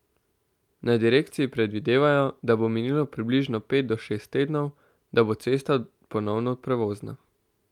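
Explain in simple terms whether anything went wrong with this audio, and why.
Nothing went wrong with this audio; the speech comes through steadily, with no audible dropouts, glitches or distortion at any point.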